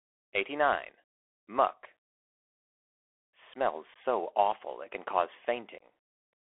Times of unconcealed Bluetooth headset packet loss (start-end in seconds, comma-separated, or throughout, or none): 3.94-3.96, 5.78-5.83